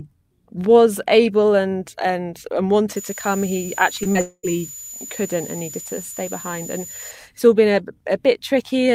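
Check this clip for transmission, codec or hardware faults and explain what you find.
Three kinds of fault are present: a steady high whistle across the middle of the clip, and a cluster of transmission losses around 4.0 to 4.5 s.

The switching supply whistle runs from 2.96 s, just after "able and and and", to 7.11 s, just before "it's all". It is a thin tone near 7 kHz, wandering only between about 6.96 and 7.00 kHz, at about 15 dB below the speech. A power supply switching in an audible burst mode puts this tone into the analogue path. Unlike mains hum, it sits high rather than at a low fundamental with harmonics.

Two short concealed packet losses fall at 4.03 to 4.07 s and 4.13 to 4.17 s. Each time, about 20 ms of audio failed to reach the decoder, and the receiver patched 14 ms and then 20 ms by extending the preceding sound before blending back. They are heard as quick smears or wobbles in the speech. 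What separates them from a dropout is their length: only a few hundredths of a second, with the speech continuing right through.

A long network dropout follows from 4.21 to 4.45 s. For about 220 ms the speech is replaced by a continuation of the last sound that fades away, ending in roughly 50 ms of silence. The speech then resumes with that stretch missing. The likely cause is a gap in packet arrival far longer than the concealment can bridge. The fade into silence and the missing audio set it apart from the brief smears just before it.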